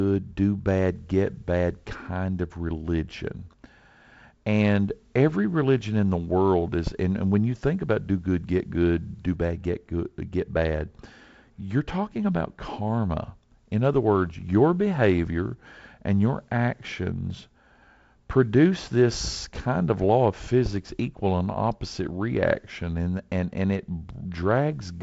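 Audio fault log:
No faults to log: the speech comes across as ordinary G.722 wideband telephone audio, with the light coding grain you'd expect at a rate that fits 48 kbit/s and nothing above 7.7 kHz.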